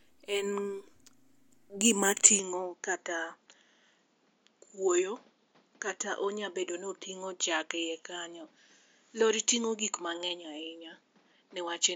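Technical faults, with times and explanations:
2.39 to 11.95 s, input switched to a poorer device: with no gap, the speech turns duller and boxier, loses everything above 7.2 kHz, drops about 5 dB, and gains a new noise floor roughly 35 dB down. The likely cause is that recording moved to a narrower-band microphone.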